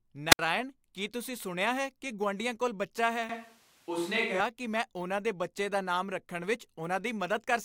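Wireless microphone squelch dropout, 0.30 to 0.39 s: the radio link from an analogue FM microphone fades, and the receiver's squelch cuts the output rather than pass a noisy signal. There is a short surge of hiss, then a hole of near silence of about 65 ms, and the voice comes back just before "ਕੀ ਤੁਸੀਂ ਸੁਣਿਆ ਹੈ". The gap is brief.

Switch to a distant microphone, 3.29 to 4.40 s: for about a second the voice turns roomy and hollow, losing low end and sounding further away, with room noise rising to around 30 dB below the speech. The level itself barely changes. The likely cause is that the close microphone's signal dropped out and a further-off microphone took over. The change in and out is sudden, and the close sound returns at "ਕਿ ਮੈਂ ਉਹਨਾਂ ਦੇ".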